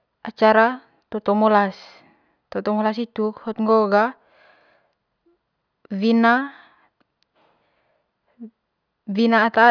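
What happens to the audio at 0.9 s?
Nothing goes wrong at 0.9 s; the speech there plays through intact, with no dropout, click or distortion.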